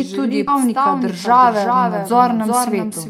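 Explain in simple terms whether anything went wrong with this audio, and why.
Three things went wrong. Throughout the clip there is a doubled audio track. A second copy of the speech trails the first by about 0.4 seconds, a little quieter, like a hard echo with no room sound. A slower second recording path likely captured the same audio twice.

At about 0.47 seconds, right after "želi tudi", there is a skip ahead. Roughly half a second of speech is simply gone. The audio jumps straight to later speech, with no gap or filler, because that stretch was dropped while newer audio was already waiting.

From 0.58 to 2.85 seconds there is a jitter buffer speed-up. The speech runs about 5 percent faster, but the pitch stays the same, so it sounds slightly hurried. The player was holding too much audio. It trimmed many tiny slices, about a tenth of a second in total, to catch up.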